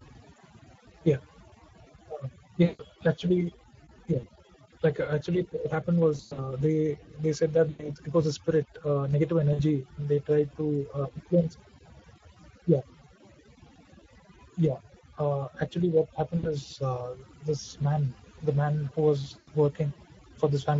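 Overdone noise removal runs through the whole clip. The noise reducer was set too aggressively, so it pulls individual frequency bands far down or out whenever they sit close to its noise estimate, and softer parts of the speech are removed along with the noise. Between phrases the background drops to near silence dotted with twinkling specks.

Speex codec damage is also present from start to finish and is plainly audible. Speex is a CELP speech codec, and here the coding sounds like a bitrate around 17 kbps. At that level it has few bits to describe the excitation signal, so the speech takes on a noisy, hoarse grain.

VoIP packet loss concealed by the speech codec shows up seven times: at 2.63 to 2.82 s (about 160 ms lost), 4.19 to 4.27 s (40 ms), 6.17 to 6.53 s, 7.69 to 7.90 s (100 ms), 9.53 to 9.61 s (60 ms), 16.37 to 16.55 s, and 19.39 to 19.51 s (80 ms). The gap at 6.17 s, just before "they they said", is broken up: 140 ms is lost in short pieces spread over 200 ms, the longest run being 80 ms. 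The gap at 16.37 s falls between "uh actually what" and "uh this man the" and loses 60 ms. The gap at 19.39 s comes right after "the man who was". In each case the decoder filled the hole by repeating its last pitch and filter while lowering the gain, so the sound smears into a fading buzzy tone or coloured noise. Because each frame depends on the previous one, the speech stays weak or distorted for a short while after the packets return.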